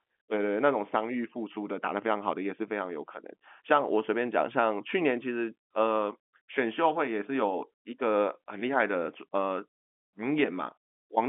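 No technical faults are audible.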